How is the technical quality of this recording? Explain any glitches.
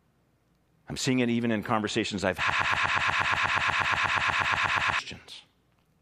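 There's one real problem here, a broken-record loop. Right after "even in conversations I've", at about 2.50 s, the speech stops moving forward and a single 120 ms slice repeats back to back, 21 times, until about 4.99 s. It sounds like a stuttering buzz of the same syllable fragment. The likely cause is the player or stream stalling and resending the last piece it had, so whatever should have been said in those two and a half seconds is simply gone.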